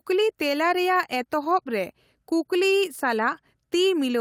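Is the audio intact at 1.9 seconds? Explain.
Yes, at 1.9 seconds the speech is intact, with no audible fault at that moment.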